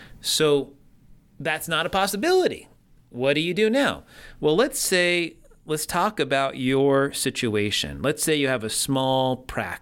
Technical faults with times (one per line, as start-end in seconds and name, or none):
none